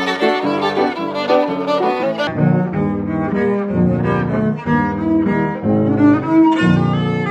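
The audio has a section at the wrong speed. It starts at 2.27 s and runs to the end at 7.30 s. From that point, playback drops to 0.543 times the original rate. Speed and pitch fall together, so everything turns slow and deep. The pitch sits about ten semitones lower. The change is abrupt, not gradual. The likely cause is this part being played or edited against the wrong clock.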